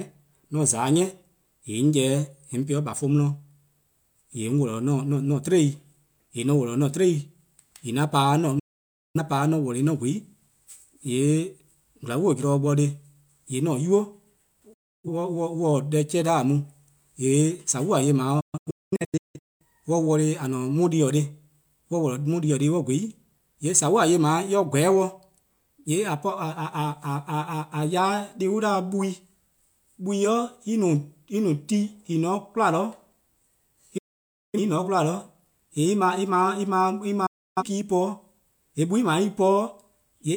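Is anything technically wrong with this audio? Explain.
Yes. Five digital broadcast dropouts occur, at 8.59–9.20 s, 14.73–15.08 s, 18.40–19.65 s, 33.98–34.59 s and 37.26–37.63 s. In each one the receiver stopped getting usable data, either because the signal was lost or because frames failed their checksum, and it muted until valid frames arrived again. The speech fades to silence in about 8 ms and then resumes further along, so roughly 0.55 s is lost in the first and fourth gaps and about 0.3 s in the second and fifth. The event at 18.4 s is a cluster of short holes spread over about 1.2 s, and the longest of them is about 0.21 s.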